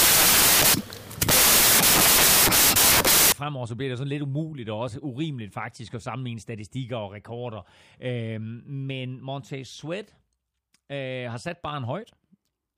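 From the start to 3.32 s, loud hissing noise swamps the speech, with a sped-up trace of it buried underneath, running 1.5 times fast and pitched up, until the clean passage resumes at "fremover så bliver det". This is a wrong sample width fault. The bytes are grouped into samples of the wrong size, so most values mix bytes from neighbouring samples. The speed ratio fits 16-bit audio being read as packed 24-bit.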